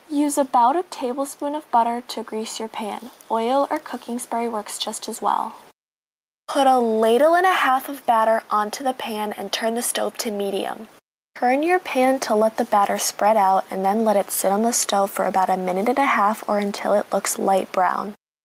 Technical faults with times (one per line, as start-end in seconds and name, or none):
0.00-18.44 gain pumping